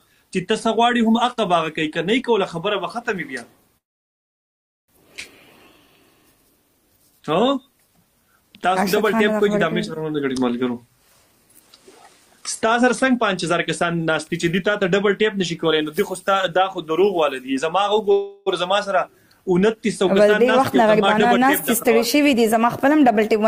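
Two call audio freezes interrupt the audio. At 3.77 s the sound stalls for 1.1 s. A brief smear of the last sound decays into near silence. At 18.12 s a 0.35 s hold of the last sound fills the gap. Nothing is lost afterward. Each is likely a jitter buffer running dry while packets were held up. Three jitter buffer speed-ups also occur. From 11.60 to 14.07 s playback runs at 105%, trimming roughly 150 ms. From 20.58 to 21.45 s it runs at 104%, and from 21.88 to 23.47 s at 106%. The receiver cut pitch-period slices to shed built-up delay. Pitch stays put, and the 105% and 106% stretches sound rushed.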